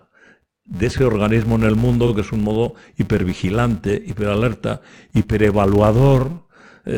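Speech, with a filter restarted on every block throughout: each block starts its filter from silence, leaving a small transient that forms a steady buzz near 172 Hz, which fits a 256-sample block. Unlike mains hum, this buzz rises and falls with the speech level and fades in quiet passages. Between 2.07 and 2.11 s, after "organismo en el mundo" and before "que es un modo", there are repeated frames: 40 ms of audio plays once more, heard as a brief stutter. Unlike a dropout, nothing is missing; the same material replays and the clip runs 40 ms longer.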